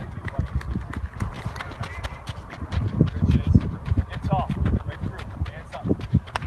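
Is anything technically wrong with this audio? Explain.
Yes, there are two faults.

At 1.17 s there is a skip ahead: about 0.4 s of audio was dropped while later audio was already waiting, so playback jumps straight on. Unlike a dropout, no silent gap is left.

From 1.76 to 2.03 s comes a jitter buffer speed-up: the receiver cut repeated pitch-period pieces, roughly 40 ms in total, to shrink its backlog. The sound runs at 112% speed and feels hurried, but unlike a sample-rate error the pitch stays the same.

The call path's codec limits the bandwidth to 12 kHz, which fits Opus at around 24 kbps.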